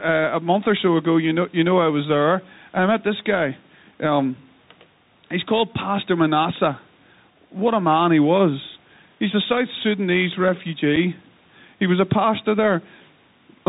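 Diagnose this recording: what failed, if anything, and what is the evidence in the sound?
The speech rides on a codec stage, the Bluetooth CVSD headset codec: nothing passes above 4 kHz, s sounds are scratchy, and a granular hiss sits under the voice throughout. That one-bit delta texture, rather than the muffled smoothness of ordinary narrowband telephony, fits a 64 kbps CVSD link.

Gain pumping runs through the whole clip. The room noise sits about 39 dB below the speech, and the gain swings by around 5 dB. The likely cause is gain set too high, with a fast limiter in call processing pulling it back. Unlike noise suppression, it leaves the noise's character unchanged.

At 10.96 s there is unconcealed Bluetooth headset packet loss on the wireless link: a hole of about 7.5 ms with abrupt edges, which fits two lost headset packets replaced by silence or an idle pattern. The hard edges and the lack of any smoothing set it apart from concealed loss.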